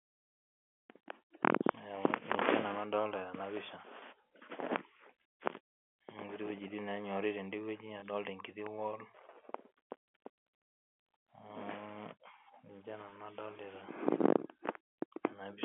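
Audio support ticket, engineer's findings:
Packet loss with pitch repetition at 1.72 s, 4.00 s, 8.00 s and 13.10 s. Each is a single lost 20 ms packet, bridged by looping the last pitch period, heard as a brief buzzy held tone. Spectrogram shows frozen, evenly spaced harmonics; waveform shows identical repeating cycles fading out.

Loud pop at 8.67 s. A single sharp click peaking roughly 10 dB over the speech, which continues underneath. Likely a voltage transient from a connector, switch or driver glitch. Waveform shows one isolated spike; spectrogram shows a thin full-height vertical line.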